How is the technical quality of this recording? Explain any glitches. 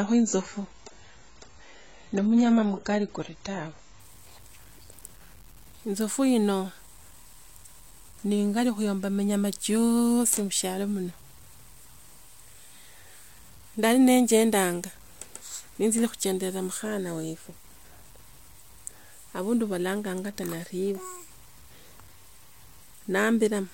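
The speech has two faults: a grainy texture throughout and a dull, degraded opening.

From the very start, the speech carries a gritty, rasping grain that follows the voice, thickening on quiet syllables and sputtering in the near-silent gaps. The likely cause is low bit depth without dither. The audio was truncated to around 8 bits, leaving error roughly 30 dB below the signal that tracks the sound rather than sitting as steady hiss.

For the first 4.0 s, the speech sounds muffled and smeared, with nothing above 7.7 kHz and heavier codec swirl, before it suddenly brightens with no gap. This is an adaptive stream starting at a low bitrate. The player began on a thin version, which fits roughly 16 kbit/s AAC, then stepped up to a fuller one, which fits around 96 kbit/s.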